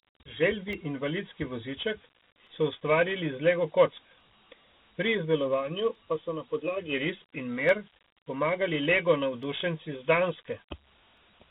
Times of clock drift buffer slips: 0.73-11.17

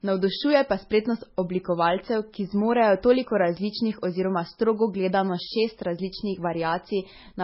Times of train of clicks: none

